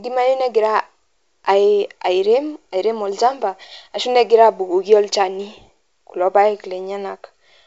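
No technical faults can be heard in the speech. It has the sound of G.722 wideband telephone coding at 64 kbit/s, with nothing above 7.8 kHz and at most a faint trace of coding texture.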